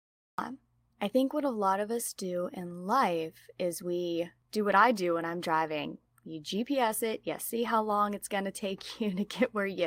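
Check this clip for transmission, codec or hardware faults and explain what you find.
Two faults are audible: a cut-off start and one lost packet rebuilt from error correction.

Cut-off start, 0 to 0.39 s: the clip opens in digital silence and the speech cuts in abruptly at 0.39 s, just before "I think what a". Capture began late, mid-sound, so there is no natural onset or fade-in.

Lost packet rebuilt from error correction, 6.87 to 6.89 s, just before "it you see how": a brief rough, noisier patch with no gap. The 20 ms length fits a single lost packet, which the decoder replaced with the lower-bitrate copy carried in the following packet.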